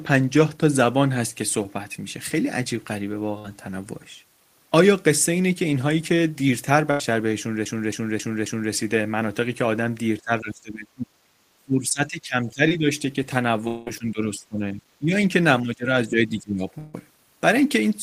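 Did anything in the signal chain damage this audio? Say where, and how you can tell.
Yes. Brief smears at 1.63 to 1.65 s, 11.90 s and 12.68 to 12.71 s are short concealed packet loss at the network stage. Roughly 10 to 20 ms of audio never arrived in time, and the decoder patched each hole by extending the preceding sound.

Longer held buzzes or fading hiss at 3.38 to 3.45 s and 6.91 to 7.01 s are bursts of packet loss. About 50 ms and 90 ms went missing. The receiver stretched the last sound while attenuating it, then resumed further along without the lost stretch.

From 7.65 to 8.72 s a fast, even stutter replays a 0.27 s segment four times with short mutes between. That is a CD stuck on one turn, a storage and playback fault where a scratch throws the laser back to the same point on every rotation.

The audio dips by about 20 to 30 dB, loses its top end or breaks up at 10.24 to 11.36 s, 11.58 to 12.89 s, 13.98 to 15.15 s, 15.63 to 15.89 s and 16.08 to 16.66 s. 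That is speech suppressed in double talk, likely from echo cancellation in the call processing turning the talker down while both sides overlapped.

At 13.67 to 13.87 s and 16.78 to 16.94 s the sound dissolves into a decaying buzz or hiss for roughly 190 ms and 150 ms, with no full silence, then resumes further on. This is likely a long network dropout, where the receiver concealed the gap until audio returned.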